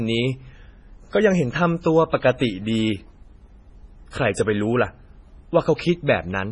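Throughout the speech, the treble stops dead at 10.5 kHz, and the audio has a watery, swirling quality as weak frequency detail flickers in and out. This points to heavy MP3 compression, likely at a low rate around 24 kbps, which starves the encoder of bits.

From 4.11 to 4.13 s, a sharp attack is preceded by a short hiss spread over about 24 ms. This is pre-echo: the codec smeared its quantisation noise across the whole block, into the quiet moment before the onset, so the attack sounds blurred and softened.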